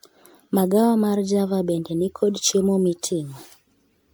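Generation loss throughout: the speech sounds swirly, hollow and smeared, likely from about ten MP3 passes. A spectrogram shows patchy holes and nothing above 19.9 kHz.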